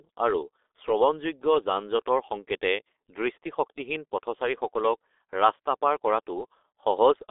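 G.723.1 codec damage runs through the whole speech clip: nothing reaches above 3.8 kHz, and the line band of roughly 300 Hz to 3.6 kHz leaves voices muffled and hoarse. The coarse, slowly updated voice model, fitting a rate near 6 kbit/s, smears consonants heavily.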